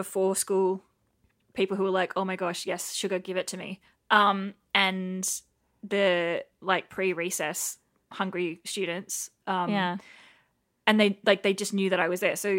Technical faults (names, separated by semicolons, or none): none